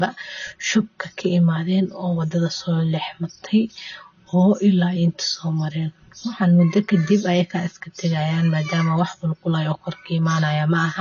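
From the start, the speech has a hollow, phasey tone from channel delay (comb filtering). One side runs roughly 5 ms late, so the mono sum cuts notches starting near 100 Hz. Throughout, there's also nothing above 6.9 kHz, with a dull, smeared, fizzy texture on sibilants, likely from AAC compression at a low rate, which fits about 24 kbps.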